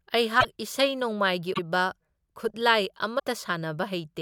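Short glitches interrupt the speech at 0.40 to 0.45 s, 1.53 to 1.59 s and 3.18 s, each skipping ahead. This is likely a broken MP3 bit reservoir: after lost frames, fitting about 24 ms each, following frames decode from another frame's borrowed bytes.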